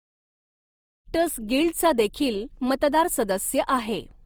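Throughout the speech, the grainy, rough texture rather than MP3-style swirl points to likely Opus compression in its CELT mode, with bands noise-filled at a low rate consistent with about 24 kbps. The smooth fade-in near one second is deliberate editing, not damage.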